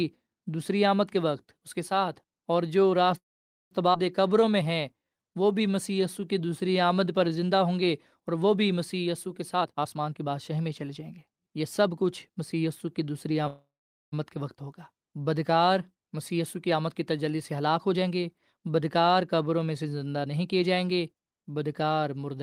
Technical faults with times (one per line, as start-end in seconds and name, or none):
3.17-3.73 call audio freeze
3.93-3.96 skip ahead
4.22-7.56 jitter buffer slow-down
9.41-13.31 jitter buffer speed-up
13.47-14.14 call audio freeze
16.32-17.52 jitter buffer speed-up
20.16-20.48 jitter buffer speed-up